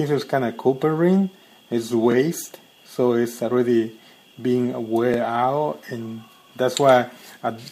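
At 2.12 to 2.14 s and again at 5.14 to 5.16 s there is a brief stutter from overlapping chunks. The audio was handled in 3.0 s blocks, each starting before the previous one ended, so about 23 ms of sound plays twice at every join.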